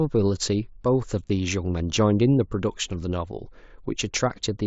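At 1.28 s the speech briefly smears into a repeated buzz, concealed Bluetooth headset packet loss: about 15 ms of audio, likely two lost packets, was patched by repeating recent waveform.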